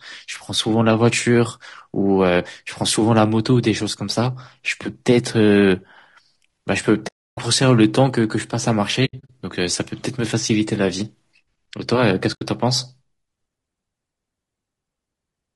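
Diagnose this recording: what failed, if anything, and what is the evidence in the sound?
Codec stage. The speech is rough and grainy from start to finish, with noise filling the gaps between harmonics and a thin, synthetic top band. That's plainly audible damage, likely from low-delay AAC compression, and it fits AAC-ELD running at around 32 kbps.

Network into the decoder: AAC frame loss with muting. There are soft-edged holes at 7.07 to 7.38 s, in a scattered patch from 9.05 to 9.30 s with the longest gap around 70 ms, and briefly at 12.33 to 12.43 s. Missing frames were zeroed, so the overlapping windows fade the sound out and back in.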